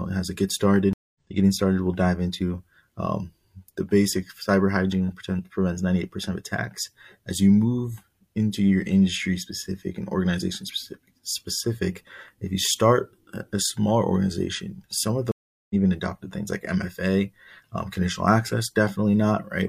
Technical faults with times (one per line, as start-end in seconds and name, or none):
0.93-1.18 stream reconnect
15.32-15.75 stream reconnect